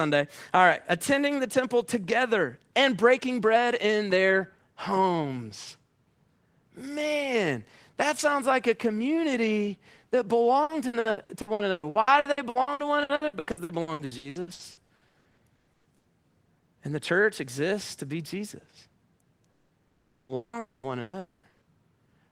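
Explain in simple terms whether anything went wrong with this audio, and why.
From 10.63 to 16.06 s the speech turns choppy and robotic. That is repeated packet loss: about 37 short gaps, the longest 120 ms, each patched by stretching the last sound. Nearly half of that stretch is filler rather than real speech.

Between 19.51 and 21.46 s the speech cuts out five times, at 19.51 to 19.72, 19.87 to 20.32, 20.35 to 20.56, 20.59 to 20.86 and 21.19 to 21.46 s. Each cut is a fading buzz or hiss that drops to near-silence, and the speech then resumes with that part missing. This is likely a long network dropout.

Two shorter holes, at 21.01 to 21.16 s and 21.49 to 21.64 s, are bursts of packet loss. A few packets in a row went missing, so about 120 ms of speech was replaced by a brief held buzz or fading hiss before the sound picked up again further on.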